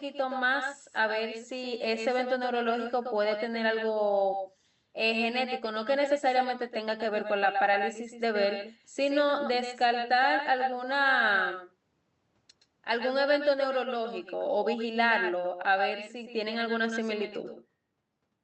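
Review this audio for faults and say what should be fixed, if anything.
Echo with no canceller runs through the whole clip: the far end's loudspeaker feeds its microphone and the speech returns roughly a tenth of a second later, about 7 dB down and thinner, audible on top of the Opus-coded audio band-limited near 8 kHz. Enable acoustic echo cancellation at the far end or have that participant use a headset.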